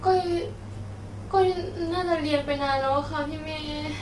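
From start to finish the speech sounds rough and grainy, with noise filling the gaps between the harmonics and nothing above 11.6 kHz. That's likely low-delay AAC compression, with short frames smearing pitch detail at what sounds like roughly 32 kbps.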